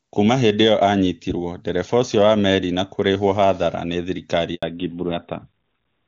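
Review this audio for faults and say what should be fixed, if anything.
A handover gap runs from 4.55 to 4.63 s, just after "kũrĩhũo hathara nĩ thirikari". The speech fades within a few tens of milliseconds and goes silent for 80 ms. The call switched networks, and no frames arrived until the new link came up. Whatever was said in that window is gone. Prevention: tune handover so the new link is ready before the old one drops.

A fallback to narrowband follows at 4.63 s and lasts to the end. Before it, the HD Voice sound is clean, which points to AMR-WB near its top rate. After it, nothing above 4 kHz remains. The speech turns duller and rougher, consistent with AMR-NB at 12.2 kbit/s. Prevention: keep the call on networks that support wideband after handover.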